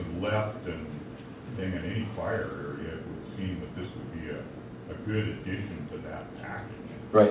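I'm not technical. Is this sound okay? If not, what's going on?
Yes, it's fine: it has the narrower, phone-like sound you'd expect from a call line, since nothing above 4 kHz comes through, but nothing has gone wrong with it.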